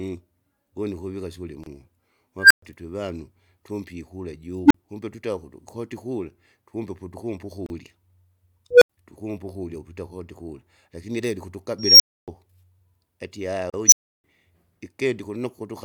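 A speech recording with two recurring faults. The first is a gap at a join of encoded pieces: brief silences at 1.64–1.66 s, 7.66–7.70 s and 13.70–13.74 s, about 28 to 37 ms each and spaced every 6 s. That spacing points to separately encoded segments joined without trimming the encoder's start delay and end padding. A waveform shows a short flat dropout with slightly softened edges, and a spectrogram shows a thin blank vertical stripe across all frequencies before the speech resumes where it stopped. The second is an unstable filter, five times. At 2.39–2.62 s a tone near 1.5 kHz builds for 116 ms, then 120 ms of silence. At 4.64–4.74 s, between "twevanu tumpe ikula" and "kumbe twita ukutu koti", a tone near 300 Hz builds for 61 ms, then 40 ms of silence. At 8.71–8.90 s, just before "tukumpu ukurya ukuita kotikula", a tone near 500 Hz builds for 109 ms, then 80 ms of silence. At 11.79–12.28 s, after "ukuita kotikula lakini ilebe", a tone near 5 kHz builds for 213 ms, then 280 ms of silence. 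At 13.86–14.24 s a tone near 7 kHz builds for 57 ms, then 320 ms of silence. Each time a recursive filter with bad coefficients feeds back on itself until its output overflows and it resets. On a spectrogram this is a single horizontal line brightening fast, then an empty column. On a waveform it is an envelope swelling into flattened, clipped peaks, then a flat line.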